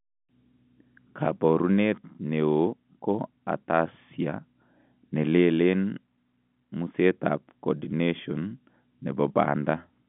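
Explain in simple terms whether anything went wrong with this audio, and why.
Nothing went wrong here.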